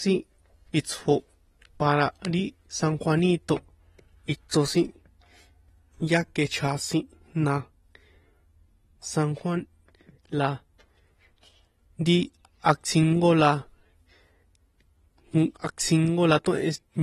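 From start to finish the speech carries plainly audible codec damage, most likely AAC compression. Nothing sounds above 12.5 kHz, so the top is dull, and the sibilants and held vowels take on a watery, fizzy warble where sparse spectral coefficients were quantised coarsely, which fits a low bitrate around 32 kbps. A plain low-pass filter would only dull the sound; this swirling texture inside the remaining band marks lossy transform coding instead.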